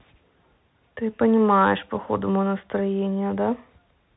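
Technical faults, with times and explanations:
throughout: Bluetooth CVSD headset codec, cutting everything above 3.9 kHz; its one-bit up-down steps lag loud high sounds, leaving scratchy s sounds over granular hiss.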